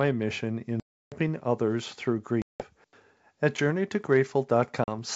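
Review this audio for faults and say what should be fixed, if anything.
Three hard-edged silent holes cut into the speech, at 0.80 to 1.14 s (about 320 ms missing, ending just before "others through"), at 2.42 to 2.67 s (about 180 ms, right after "others through"), and a brief 40 ms gap at 4.84 to 4.97 s. Each restart comes back slightly distorted. This is packet loss on an ADPCM call. The first gap's length points to over a dozen packets dropping together. The silence was substituted for the missing audio, so the decoder's adaptive predictor and step size drifted from the sender's and needed tens of milliseconds to realign. The G.722 wideband coding itself sounds clean at 64 kbit/s. Adding a jitter buffer with packet-loss concealment that keeps the decoder state continuous, plus forward error correction or redundancy on the link, would prevent these holes.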